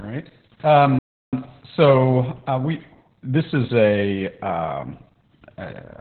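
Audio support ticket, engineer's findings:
Opus voice compression throughout: muffled, hoarse, slightly robotic speech, band capped near 4 kHz. SILK-only narrowband coding with coarse excitation, consistent with around 8 kbps.

Playback stall at 0.99–1.33 s: roughly 0.34 s of silence mid-flow, resuming at "so uh we this". Likely cause: player buffer underrun or blocked audio thread.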